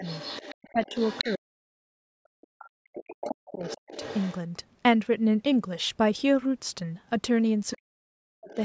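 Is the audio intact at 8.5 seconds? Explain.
No. Speech suppressed in double talk runs from 7.76 to 8.58 s: the echo canceller, likely confused by both sides talking, pulls the voice down by as much as roughly 40 dB. The other side's voice leaking through appears from 8.49 to 8.55 s, a brief scrap about 25 dB below the speech, likely loudspeaker echo the canceller failed to remove.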